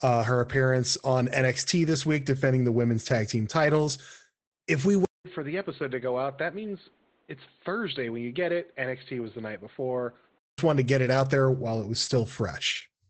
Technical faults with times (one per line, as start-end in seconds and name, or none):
0.00-13.09 Opus voice compression
5.05-10.58 input switched to a poorer device